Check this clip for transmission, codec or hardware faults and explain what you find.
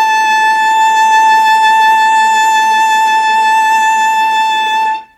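No faults turn up when checking this music clip.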